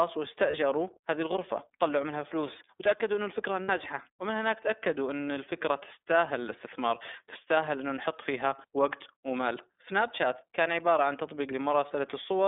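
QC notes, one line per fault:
throughout: iLBC codec. The speech is confined to roughly 300 Hz to 3.6 kHz, with a plainly audible rough, synthetic edge. Each frame's excitation is coded independently at a low rate, which fits 30 ms frames at about 13.3 kbps.
0.50–0.54 s and 3.63–3.70 s: lost iLBC frames. Gaps of 30 ms and 60 ms, consistent with one and then two missing 30 ms frames, are filled by a repeated last pitch cycle mixed with noise. This is heard as a brief held, buzzy vowel, and the speech recovers immediately afterwards.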